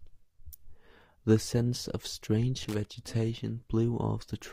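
Speech with a burst of loose connector crackle from 2.59 to 2.85 s, just after "scents of": a worn contact making and breaking chops the signal into irregular scratchy pops. Its ragged, uneven texture distinguishes it from the regular, evenly spaced ticks of digital clock errors.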